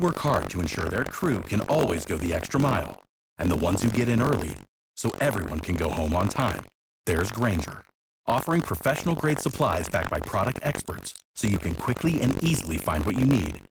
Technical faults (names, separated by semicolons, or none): buffer tearing